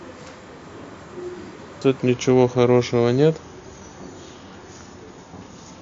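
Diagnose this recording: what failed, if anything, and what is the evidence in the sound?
Wrong sample rate at the playback stage: from 2.01 s onward, speech slows to 0.92× and drops about 1.5 semitones, which fits 24 kHz audio clocked out at 22 kHz. Unlike a pitch shifter, tempo and pitch fall together.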